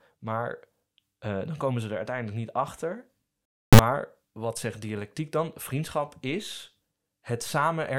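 From 3.45 to 3.79 s the speech gives way to an integer-read-as-float fault. The sound points to 32-bit integer samples being read as 32-bit float, so most values decode as near-zero or far beyond full scale. The output slams between silence and the clipping ceiling, heard as a harsh, very loud square-wave buzz. Unlike ordinary overload clipping, which flattens only the peaks of a still-recognisable signal, the output here is reduced to a square wave that drops to silence only in very quiet passages.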